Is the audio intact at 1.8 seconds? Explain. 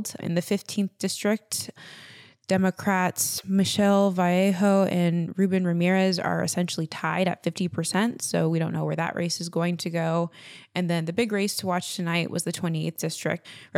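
Yes, at 1.8 seconds the speech plays through intact, with no dropout, click, distortion or other fault audible at that point.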